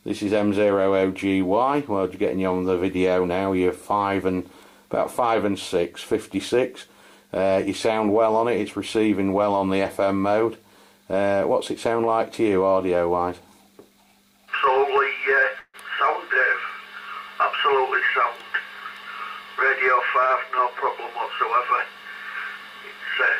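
At 15.59 s the sound stalls: the last moment is drawn out as a fading buzz, drops to about 50 ms of silence, then resumes at 15.76 s with nothing lost. This call audio freeze was likely packets delayed past an empty jitter buffer, adding 143 ms of delay.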